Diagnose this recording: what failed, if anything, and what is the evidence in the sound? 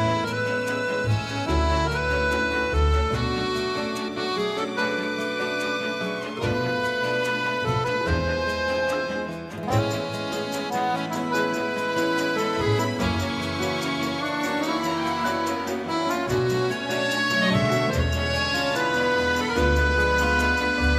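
Nothing failed; no fault is audible anywhere.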